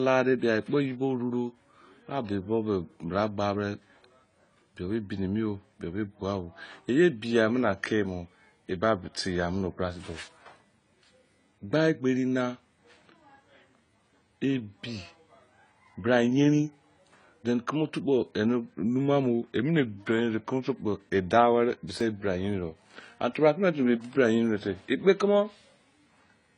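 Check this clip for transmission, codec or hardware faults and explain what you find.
Two problems here, one running the whole way through and one that pops up twice.

Throughout, the speech sounds dull and smeared. That's likely AAC compression at a low bitrate, something like 24 kbps, with the encoder dropping the top band to save bits.

At 9.61 s and again at 22.01 s the sound jumps forward. That points to a dropped buffer (overrun): about 10 ms was lost the first time and a few ms the second, and the two sides were spliced straight together.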